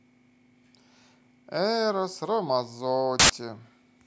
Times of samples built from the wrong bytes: 3.19-3.30

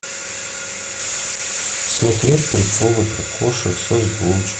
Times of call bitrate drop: 1.01-4.59

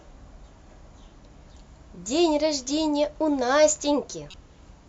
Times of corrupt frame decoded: 4.30-4.34

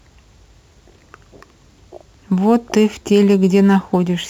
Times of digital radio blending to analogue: none

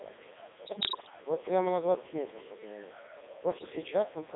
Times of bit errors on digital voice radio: 0.66-1.10, 3.52-3.70

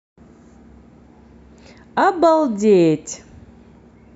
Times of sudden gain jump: none

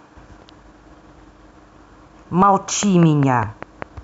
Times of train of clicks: 2.83-3.83

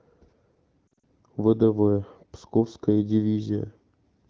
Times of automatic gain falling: none

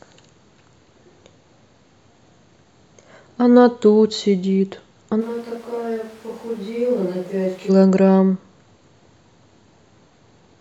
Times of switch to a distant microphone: 5.22-7.68

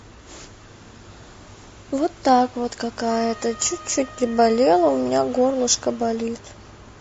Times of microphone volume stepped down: none

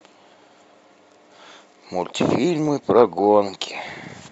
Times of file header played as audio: none

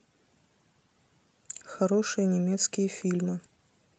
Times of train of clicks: none

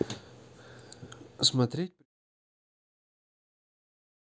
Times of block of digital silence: none

